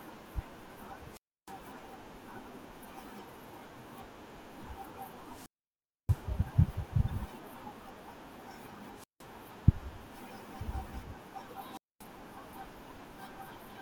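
The radio link to this wireless microphone fades repeatedly until the receiver's squelch cuts the output, causing a wireless microphone squelch dropout at 1.09–1.55 s, 5.23–6.29 s, 8.93–9.28 s and 11.71–12.06 s. Each time, hiss swells, the speech drops into near silence for 307, 632, 165 and 233 ms, then returns. In addition, at 7.09–7.11 s and again at 12.88–12.97 s, a corrupt frame was decoded. Flipped bits in a couple of compressed frames, then a few, misplace spectral energy, producing short chirp-like blips peaking near −30 and −40 dBFS.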